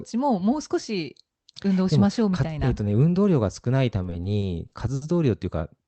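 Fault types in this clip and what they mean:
Repeated stalls (stutter): from 4.03 to 5.03 s the playback buffer ran dry six times. The gaps are filled with continued sound rather than removed, so the speech drags. On a spectrogram these show as stretched, smeared bands with no silent holes.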